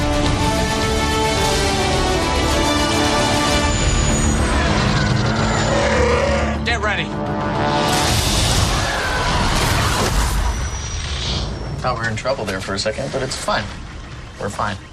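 At 13.32 s there's a single sharp click, and it's most likely dropped samples: a couple of samples vanish from the stream, so the waveform leaps straight to a later value. The gap is a tiny fraction of a millisecond, far too short to lose any sound, so all you hear is that one tick.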